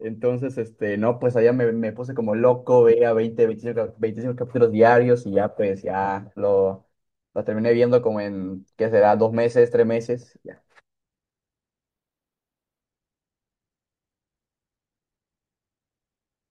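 It's a speech recording, and there's a section at the wrong speed from about 11.90 to 12.81 s. For just under a second the audio runs at twice its normal rate, so it rushes by and jumps up about ten semitones, high and chipmunk-like, before dropping straight back to normal. Speed and pitch shift together, so the likely cause is that stretch being played or rendered against the wrong clock.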